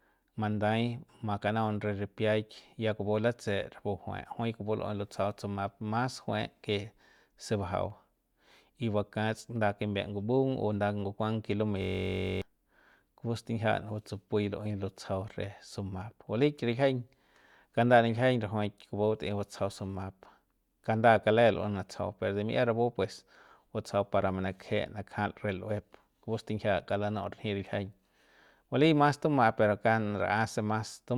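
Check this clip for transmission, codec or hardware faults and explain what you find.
One fault: a system hang loop in the middle of the speech.

From 11.82 to 12.42 s the audio turns into a steady, rasping buzz at about 46.9 Hz. A single 21.33 ms fragment repeats exactly, around 28 times, which fits a 1024-sample buffer. The driver or computer stalled, but the sound hardware kept replaying the same ring buffer. Because the loop is so short, the repeats merge into a tone rather than a stutter, and around 0.7 s of real audio is lost.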